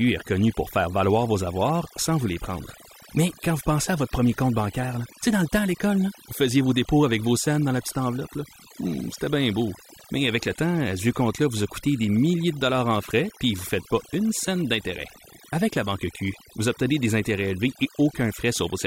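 Across the whole recording the background sinks to near silence dotted with twinkling specks. This is overdone noise removal: a denoiser set too aggressively switches off frequency bands near its noise estimate, taking quieter parts of speech with them.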